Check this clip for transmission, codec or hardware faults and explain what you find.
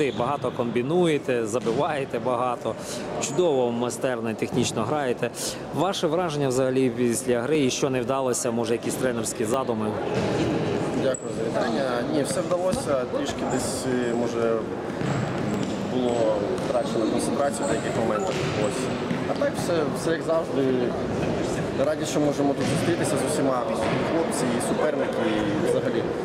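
One hardware fault is present: periodic USB or driver dropouts from 7.55 to 17.54 s. Something stalls the USB bus or audio driver every 2.0 s, skipping a couple of milliseconds of audio each time. The resulting splices produce roughly seven evenly spaced ticks in the sound.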